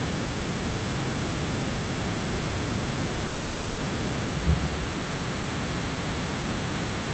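At 3.27 s the speech stalls for about half a second, to 3.80 s, with the last sound stretched into a fading buzz or hiss rather than silence. That's a call audio freeze, likely from packets held up until the jitter buffer ran dry. When it resumes, the speech picks up where it stopped, so nothing's lost, just a half-second gap added.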